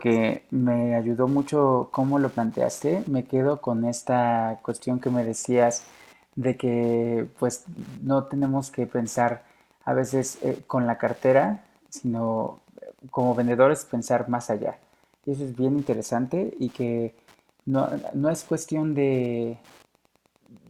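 From start to finish, a steady ticking sits under the speech at a fixed rate of one tick every 102.4 ms, close to ten per second. This is Wi-Fi interference. A nearby Wi-Fi radio's periodic beacon transmissions are being picked up and rectified by the audio circuitry, turning each radio burst into an audible click. The ticks stay well below the speech, roughly 35 dB down.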